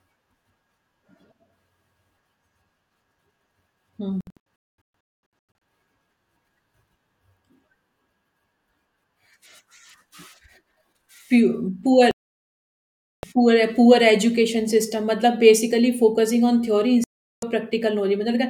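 The speech cuts to silence three times. From 4.21 to 5.32 s it breaks into several short holes, the longest about 0.22 s, losing about a second of sound in all. From 12.11 to 13.24 s it goes silent for about 1.1 s, and from 17.04 to 17.43 s for about 0.38 s. This is digital broadcast dropout: the receiver muted while frames were corrupted or missing, and the programme resumes further on, so whatever was transmitted during each gap is gone.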